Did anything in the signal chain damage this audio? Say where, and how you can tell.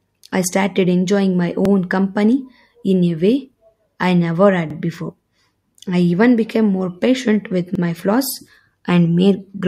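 Yes. Overlapping chunks at the buffer stage: the speech was handled in 3-second chunks, each starting before the previous one ended, so 50 ms replays at every join. That stutter falls at 1.65 s after "enjoying my", 4.70 s, and 7.75 s after "became more patient with".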